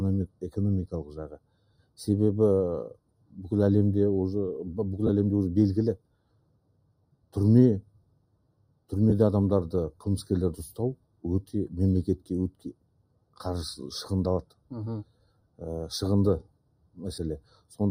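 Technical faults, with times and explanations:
Throughout: noise suppressor applied to music or sounds. A speech-oriented suppressor stays active and treats sustained tones, ambience and decaying tails as background noise, pulling them down by as much as about 20 dB while sharp onsets pass. The level breathes and thins instead of holding steady. Unlike a dropout or a codec fault, nothing is missing or smeared. Held material simply sinks while transients stay intact, which points to gain riding on content rather than to packet loss.
0.27–0.42 s, 1.04–1.98 s, 2.93–3.39 s, 5.96–8.92 s, 10.96–11.54 s, 12.18–13.4 s, 14.43–15.61 s, 16.42–17.77 s: sound cut by the noise suppressor. In each span the sustained part of the sound is pushed down further, about 18 dB at its deepest, and decays are clipped short while attacks survive. The spans range from a brief dip near 0.3 s to a long sag of roughly three seconds from 5.96 s. 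These are smooth level drops with no noisy texture, which separates them from the frame losses below.
5.07–5.10 s, 9.10–9.13 s, 17.15–17.18 s: lost LE Audio frames. Each gap lasts 20 ms, 20 ms and 30 ms, which fits two, two and three lost 10 ms LC3 frames. The decoder fills them by repeating the previous spectrum with scrambled phase, so any tonal content briefly turns into a hissy smear rather than dropping in level. These events are far shorter and grainier than the suppressor's dips, and the last falls inside the suppressor span from 16.42 s.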